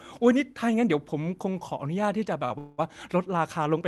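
At 2.45 s the speech hangs on one sound for an extra 48 ms, a brief held, faintly buzzy drawl, before resuming at 2.52 s with nothing lost. It is a short stall from a late packet: the jitter buffer ran dry, so the receiver stretched the last audio until the packet arrived.

From 2.58 to 2.80 s the sound smears into a fading buzz for about 200 ms. It never drops to silence, and the speech then picks up exactly where it stopped. This is a call audio freeze, likely caused by packets held up in transit that left the jitter buffer empty, so the receiver filled the wait by extending the last sound.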